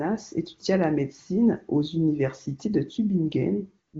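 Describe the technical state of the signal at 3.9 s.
At 3.9 s you're in a stretch of AMR comfort noise, running from about 3.87 to 3.93 s, so roughly 60 ms. The phone decided nobody was talking, stopped sending speech frames, and the far end patched the gap with synthetic noise built from a rough sketch of the background's level and spectral shape. So the real room sound briefly gives way to a smooth, steady hiss that switches in and then out again, carried over a clean-sounding AMR wideband path that fits a high bitrate.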